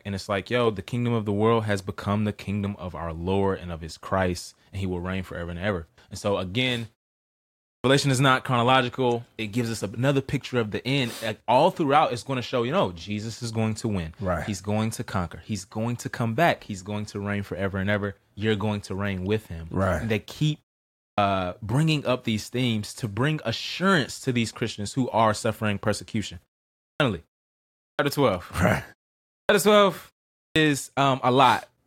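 A clipped start after a pause occurs at 7.75, 21.09, 26.9, 27.89, 29.4 and 30.46 s. The output device sleeps through pauses of 0.4 to 0.9 s and wakes late, swallowing 90 to 100 ms, so "is not chronological" and "bringing up these themes" begin abruptly.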